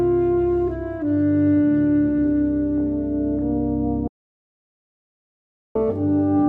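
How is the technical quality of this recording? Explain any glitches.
There is one glitch, an audio dropout to silence. From 4.08 s to 5.75 s the sound cuts off into silence, with no room tone. That is about 1.68 s lost. The likely cause is a lost input, such as a disconnected device or stray mute, while recording continued writing silence.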